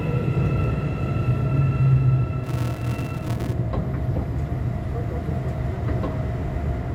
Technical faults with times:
2.44-3.53 filter restarted on every block

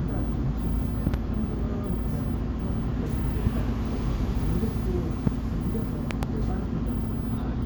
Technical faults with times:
1.07-1.16 loud pop
3.46-3.49 loud pop
5.27-5.29 loud pop
6.11-6.25 loud pop

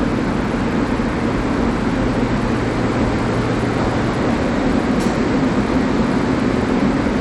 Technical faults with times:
0.00-7.21 Bluetooth SBC compression

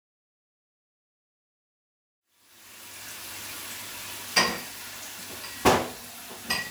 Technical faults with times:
none

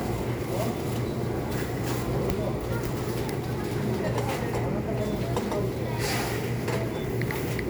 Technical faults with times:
none

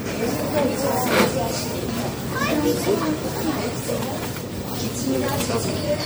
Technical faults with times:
0.00-6.06 MP3 compression

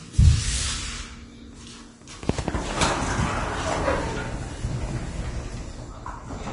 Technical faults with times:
0.00-6.53 Vorbis compression

